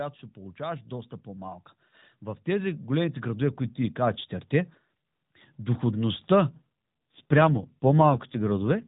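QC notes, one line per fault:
0.34–1.60 s and 2.44–4.28 s, automatic gain rising: the level swells gradually, speech and background together, by about 4 dB over roughly 1.3 s, then by about 6 dB over nearly 1.8 s. The gain control judged the input too quiet and raised its gain slowly.
6.48 s to the end, AMR rate drop: the speech turns rougher, buzzier and more synthetic, with no gap and the same narrow band. This fits the AMR narrowband codec stepping down from 12.2 to 5.9 kbps, spending bits on error protection instead of detail.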